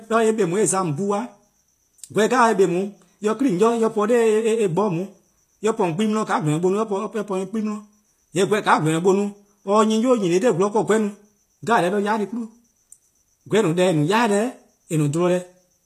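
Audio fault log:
Throughout: HE-AAC compression, likely, since the treble sounds gritty and metallic, with s sounds lispy and nothing above 14.9 kHz. A plain low-pass cut would sound dull. Here the treble is copied up from lower bands, which fits a low bitrate around 24 kbps.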